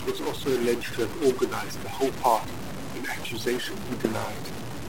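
From the start of the clip to its end, the speech carries a harsh, buzzy distortion that rides on the signal, and the pauses between phrases are filled with a steady noise floor rather than silence. The pattern fits a stuck bit, likely a single data line held at a fixed value in the converter or interface. Roughly half the samples are pushed off by a step of about -30 dBFS, which turns quiet gaps noisy.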